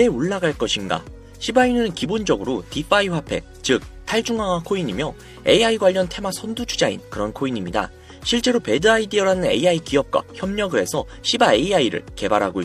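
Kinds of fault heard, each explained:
No technical faults can be heard anywhere in the clip.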